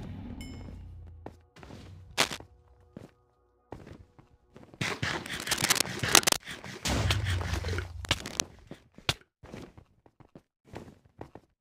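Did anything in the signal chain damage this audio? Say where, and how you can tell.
Yes, cable scratch noise, in three bursts: 2.17 to 2.38 s, 5.24 to 6.40 s, and 8.05 to 8.45 s. Dense, ragged crackle sits over the sound, about 5 dB above the signal in the first burst, about 10 dB above in the long middle burst, and roughly level with it in the last. The cause is likely in the analogue wiring: a worn cable, connector or control being moved, so that its contact resistance fluctuates and injects noise.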